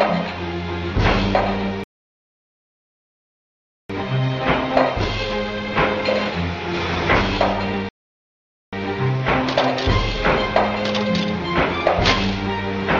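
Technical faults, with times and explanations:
1.84–3.90 s and 7.89–8.73 s, rebuffering stall: the player ran out of downloaded audio and waited, so sound drops to silence, then resumes exactly where it stopped, adding about 2.06 s and 0.84 s.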